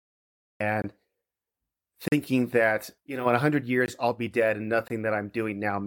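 The clip opens on digital silence until 0.60 s. Then the speech cuts in abruptly, already mid-sound. This is a cut-off start. The recording began late, so the first part of that sound is missing. There is no natural attack and no fade-in. The level jumps from nothing straight to full speech.

A block of digital silence follows at 0.82 to 0.84 s, lasting 20 ms. A longer one, 40 ms, sits at 2.08 to 2.12 s, just before "that you know in". Another 20 ms block falls at 3.86 to 3.88 s, just before "I'll be dead and". The last, also 20 ms, comes at 4.88 to 4.90 s, just after "I'll be dead and". In each, a run of samples became zeros. Either the output buffer wasn't filled in time or a calculation produced invalid values. The sound drops to silence and returns without any fade. The 20 ms gaps are short holes. The 40 ms gap is a brief audible hole.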